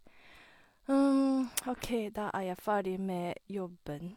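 At 1.76–1.81 s, before "da er jeg ferdig", AAC frame loss with concealment fills a 43 ms gap, fitting one frame, from earlier spectrum: a smeared, noisy spectrogram blur.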